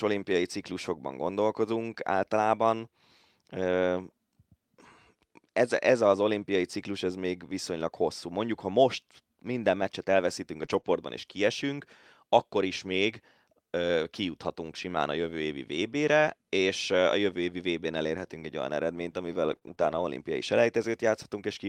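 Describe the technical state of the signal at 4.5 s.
At 4.5 s the speech signal is intact, with no fault to be heard at that moment.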